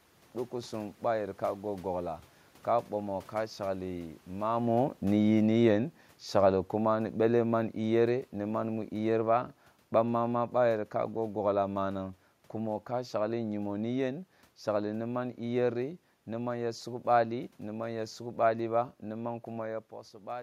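A speech clip with automatic gain falling from 1.0 s to 18.9 s. The gain control judged the input too loud or its background noise too strong and lowered its gain gradually, by about 11 dB. Speech and room noise sink together. Level shifts around 4.5 s and 19.5 s come from the talker moving.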